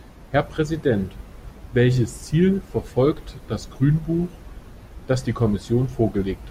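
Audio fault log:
No audible faults anywhere in this speech recording.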